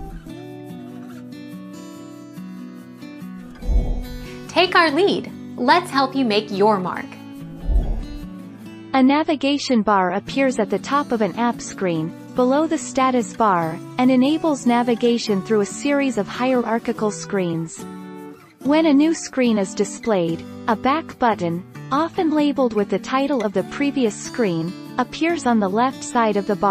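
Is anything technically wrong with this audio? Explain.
No, nothing technically wrong can be heard here.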